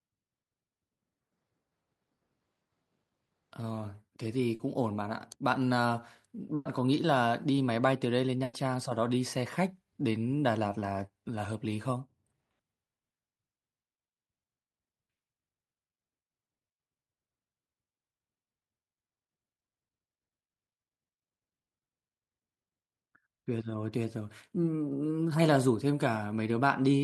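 At 4.55 s a brief smear lasting about 40 ms interrupts the speech, a wobble where the sound seems to stretch for an instant before carrying on. This is short concealed packet loss: roughly 40 ms of audio missed its playout deadline, so the receiver extended the preceding sound to cover the hole and then blended back into the real signal, leaving that sliver of speech replaced rather than heard.

At 6.55 s and again at 8.43 s the speech stalls for about a tenth of a second each time, the last sound held and fading as a buzz or hiss, with no silence, before resuming further along. Both are a burst of packet loss: around 100 ms of consecutive audio never arrived in time, the receiver synthesised continuation from what it had while turning it down, and the content in between is simply gone.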